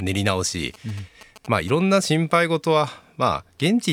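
GSM signalling bursts run from 0.74 to 1.70 s, heard as a galloping dit-dit-dit of ticks and short buzzes at about 217 Hz, sitting roughly 20 dB below the speech. A nearby 2G phone was exchanging brief signalling transmissions with its network rather than carrying a call, and the audio circuitry rectified those radio pulses into audible clicks and buzz, so the interference comes in clustered groups rather than a steady drone.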